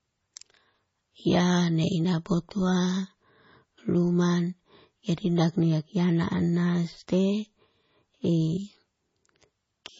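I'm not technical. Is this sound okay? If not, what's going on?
No. MP3 compression damage runs through the whole speech clip, from start to finish. Everything above about 7.6 kHz is missing, so the sound is dull and lacks crispness, and it has a watery, swirly quality. This is likely heavy MP3 compression. To save space, the encoder cut off all the high treble and threw away quieter detail, which flickers in and out moment to moment and leaves that unstable, underwater sound.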